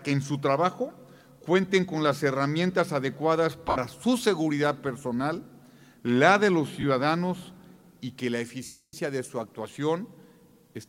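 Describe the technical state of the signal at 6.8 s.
At 6.81 s the signal has a dropout from lost LE Audio frames, ending at 6.83 s. The gap lasts 22.5 ms, which fits three lost frames of 7.5 ms each. The Bluetooth link failed to deliver those frames. The LC3 decoder filled the hole by repeating the last good spectrum with its signs randomised. Any tonal content there becomes a brief noisy smear. The loss is too short to fade toward silence.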